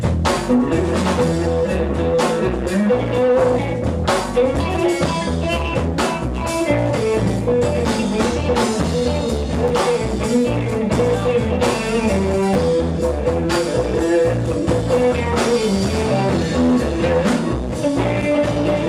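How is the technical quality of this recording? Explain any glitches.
The recording has two brief glitches, both chunks out of order. At 9.68 to 9.70 s and again at 12.53 to 12.55 s, a 10 ms chunk arrives one chunk late and plays after its successor. Nothing is lost, but the swap creates three hard joins and a momentary jumbled stutter in the audio.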